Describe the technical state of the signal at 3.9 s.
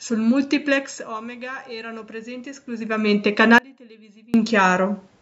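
Audio dropout to a faint residue, 3.58 to 4.34 s: the speech abruptly falls to a faint leak about 30 dB down, likely lost while the path stayed live.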